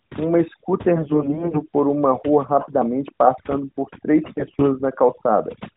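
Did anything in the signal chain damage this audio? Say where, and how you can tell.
Yes. Overdone noise removal in the call processing affects the whole clip. The background drops and breaks up into twinkling specks, because bands near the noise estimate are pulled down along with quiet speech detail.

AMR bit errors on the network link appear at 0.96 to 1.63 s, just before "por uma rua rapidamente", and at 4.24 to 4.70 s, just after "rapidamente passando por três". There the speech keeps its pitch and level but turns hoarse and gargly. Roughly one bit in ten is corrupted in the weakly protected bits of each frame, which misplaces the excitation pulses and skews the finer parameters.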